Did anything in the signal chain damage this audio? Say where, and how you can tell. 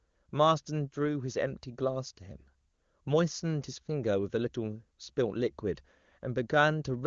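No, nothing in the chain has damaged this speech. It carries the band-limited sound of the AMR wideband (HD Voice) codec, with nothing above 7.2 kHz, and it stays clear, which fits the codec running at or near its top rate.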